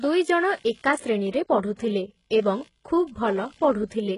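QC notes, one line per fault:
Throughout: computer activity noise. A buzzing pulse repeating at around 70 Hz sits roughly 35 dB below the speech. It rises and falls with the computer's processing load, not with the talker, because load changes disturb the ground shared with the audio circuit. On a spectrogram it shows as a comb of low harmonic lines that continues through pauses. On the waveform it appears as a fine periodic ripple riding under the speech and filling the gaps.
Throughout: HE-AAC compression, likely the cause of a heavily degraded, gritty top end. Nothing is present above 11 kHz. The upper band sounds synthetic, which fits spectral band replication at a low bitrate around 12 kbps: lower bands are copied upward and shaped only coarsely, so the treble's harmonics fail to line up with the real ones below. A spectrogram shows a hard ceiling at 11 kHz, with blocky, repeated-looking texture above the crossover.
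1.31–1.33 s and 1.76–1.79 s: pre-echo. Before each of two sharp attacks, a short hiss leads in, spanning 29 ms and 28 ms respectively, and the onsets sound softened and smeared. The attack fell late in a transform block, and quantisation noise sized for the loud part spread across the whole block, into the quiet moment before it. On the waveform, a low noise smear precedes each transient. A spectrogram shows a broadband haze just ahead of each onset.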